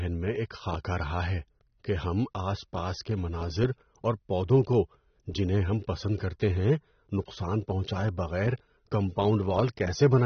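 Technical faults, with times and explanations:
Throughout, AAC compression: the speech was likely passed through an AAC-LC encoder at a low bitrate, and the plainly audible damage fits a rate of about 24 kbps. To save bits, the encoder discards everything above 6.3 kHz and quantises the remaining frequency content coarsely. As a result, the speech sounds dull and muffled, sibilants lose their crispness, and the sparse, roughly coded spectrum gives sustained sounds a smeared texture.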